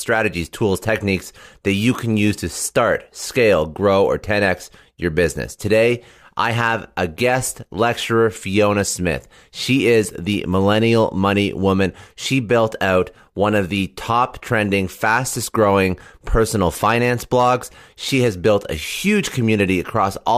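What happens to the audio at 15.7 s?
At 15.7 s the speech carries a faint hiss and graininess riding on it, strongest on loud passages and sharp, bright consonants and gone in the pauses. This is sample clock jitter, present through the whole clip rather than just at that moment. The converter's clock wavers by around half a microsecond, so samples land slightly off time; fast-moving parts of the waveform turn that timing error into noise sitting roughly 50 dB below the signal.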